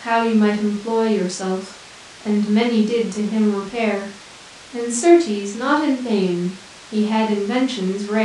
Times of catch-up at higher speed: none

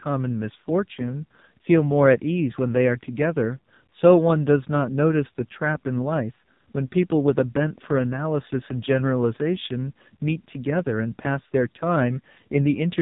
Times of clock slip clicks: none

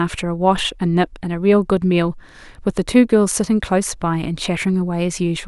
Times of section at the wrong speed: none

